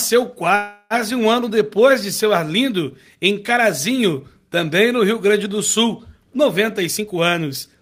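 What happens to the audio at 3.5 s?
Nothing goes wrong at 3.5 s; the audio plays through that moment intact, with no dropout, click or distortion.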